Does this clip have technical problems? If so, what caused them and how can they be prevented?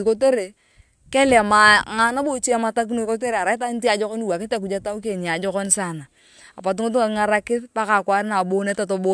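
No, there are no technical problems to report here.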